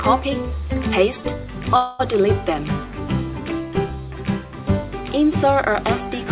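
Band-limited call audio, with nothing above 4 kHz, consistent with 64 kbps G.711 mu-law, stalls from 1.76 to 2.01 s: the last sound is stretched into a fading buzz or hiss for about 230 ms, then resumes exactly where it left off with nothing lost. This is likely a call audio freeze, where delayed packets emptied the jitter buffer and the receiver filled the wait, leaving everything afterward about 230 ms late.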